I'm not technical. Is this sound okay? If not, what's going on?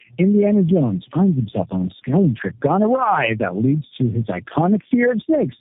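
No, it isn't quite right. From start to finish you're hearing tandem speech coding: the call seems to have been squeezed and unsquashed by four phone-network speech compressors in a row, each one working on the already-damaged output of the one before. The damage stacks up, so the speech sounds rough, muffled and warbly the whole way through. Nothing comes through above about 3.7 kHz, which is why it sounds dull and boxed-in.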